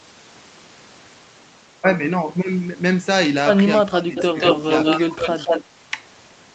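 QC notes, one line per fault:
3.76–4.16 s, 4.33–4.40 s and 4.96–5.27 s: speech suppressed in double talk. While both ends talked at once, the echo canceller likely could not tell the talker from loudspeaker echo and attenuated both. The speech sinks by up to about 20 dB, then dips by about 15 and 10 dB.
4.16–4.23 s, 4.40–5.00 s and 5.17–5.64 s: echo leak. The loudspeaker end's echo canceller likely failed to remove all of its microphone pickup and sent the remainder back. A copy of the speech is heard 184 ms late, first as a scrap about 10 dB down, then at roughly full speech level.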